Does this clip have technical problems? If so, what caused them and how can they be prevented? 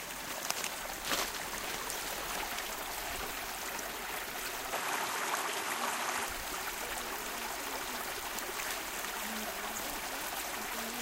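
Yes. From 4.73 to 6.27 s, the everyday sound turns duller, with nothing above 13 kHz, a small level jump and faint new noise. An input switched to a poorer device is likely. Lock the recording input to one device.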